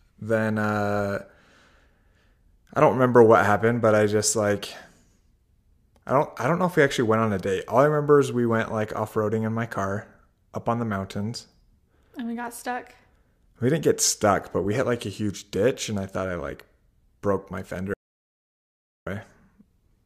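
At 17.94 s, right after "I like broke my", the speech stops dead in mid-flow and the track falls to silence until 19.07 s, about 1.13 s later, when it resumes just as abruptly. This is an audio dropout to silence, likely from the input being briefly lost while the recorder kept writing silence. Unlike a natural pause or a noise gate, no room tone or decay survives in the gap, and whatever was said there is gone.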